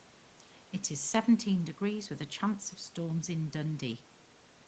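Speech, with no audible faults.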